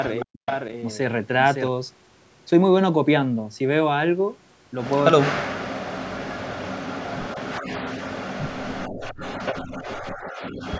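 At 0.2 s a faint echo leak appears: a copy of the speech returns about 343 ms late, roughly 20 dB below it. A far-end echo canceller likely let loudspeaker pickup through. Unlike a room reflection, it arrives as a delayed, detached scrap.

From 0.24 to 0.48 s, speech is suppressed in double talk. The level plunges by as much as about 40 dB, likely while the other side talks. The same happens from 5.13 to 5.96 s, from 6.17 to 6.49 s, and across most of 6.89 to 10.52 s. Because it is a gap rather than an added sound, it differs from the echo.

Inside that last stretch, the echo leak returns at 9.03 and 9.46 s, again 343 ms behind, about 25 and 15 dB down.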